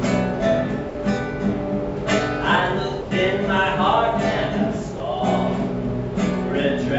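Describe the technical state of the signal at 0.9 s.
At 0.9 s the audio drops out for 60 ms, from 0.89 to 0.95 s, and steady low-level noise fills the gap. This is likely sound dropped by the voice detector: the sender classed the signal as background and stopped transmitting, so the receiver played comfort noise instead.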